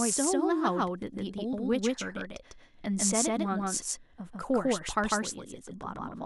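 A doubled audio track runs throughout the speech: a second, full-band copy trails the original by roughly 150 ms at about the same level, with no decay or room colour. It most likely comes from the signal being captured twice through a slower path.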